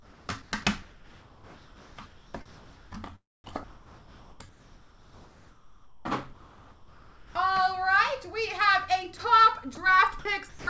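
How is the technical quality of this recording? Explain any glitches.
The recording has audible gaps and substituted background, and no sound above 8 kHz, which fits a G.722 call path.

Comfort noise in place of the background appears at 0.00 to 0.52 s, 0.82 to 2.92 s, 3.64 to 6.05 s and 6.33 to 7.35 s. The real background is swapped for smoother synthetic noise. The likely cause is discontinuous transmission, with the receiver filling each pause. In the last stretch the fill is about 3 dB quieter, against a background about 27 dB below the loud parts.

Sound dropped by the voice detector occurs at 9.75 s. About 10 ms of sound is lost and replaced by a brief fill. The sender's detector likely mistook a quiet moment for background and stopped sending. The sound resumes once the detector triggers again.

Sound chopped by the voice detector affects 10.19 to 10.67 s. The detector likely switched between sending and not sending more than once here. 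About 240 ms of sound is replaced by comfort noise, leaving two or more holes in that stretch.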